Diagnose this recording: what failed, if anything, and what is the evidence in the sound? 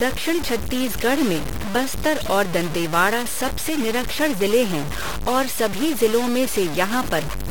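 Low bit depth without dither runs through the whole clip: the speech carries a coarse, grainy distortion whose texture shifts with every syllable, sitting only about 10 dB below the signal. The quietest passages collapse to silence or sputter rather than fading smoothly. The likely stage is a sample-format conversion that truncated the audio to about 4 bits with no dither, so the rounding error tracks the waveform and is heard as distortion rather than as steady hiss.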